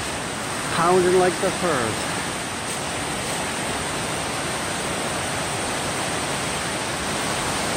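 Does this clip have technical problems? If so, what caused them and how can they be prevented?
Yes, there's one glitch, right at 5.68 s: the sound jumps forward, with around 40 ms missing and the two sides butted straight together, no gap of silence. That's most likely a dropped buffer (overrun), where the capture software didn't grab its block of samples before the hardware wrote over it. To prevent it, give the recording process a larger buffer or higher priority so it never falls behind the interface.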